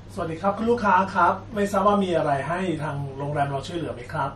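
Heavy lossy encoding, likely MP3 compression at a low bitrate, runs through the whole of this speech recording. Short of bits, the encoder has discarded everything above 13.1 kHz and dropped the weakest spectral detail frame by frame, so the damage is plainly audible: the top end sounds dull and capped, sibilants turn metallic and chirpy, the background has a watery, swirling quality, and consonant onsets smear. The degree of loss fits a bitrate of roughly 44 kbps.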